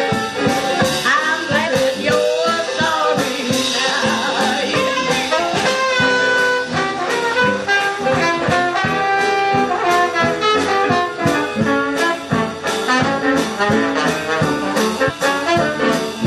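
At 1.63, 3.86, 5.34 and 15.05 s the audio jumps forward. These are compressed frames skipped. Whole frames never reach the output, because they are missing or the decoder rejected them. Each frame lasts about 46.4 ms. Around three to five frames go each time, so roughly 150 to 200 ms of sound vanishes.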